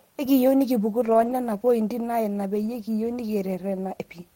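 At 1.05 to 1.31 s and again at 2.57 to 2.67 s, lost packets were rebuilt from error correction: no gap, just rougher, noisier stretches, matching roughly seven and three 20 ms frames.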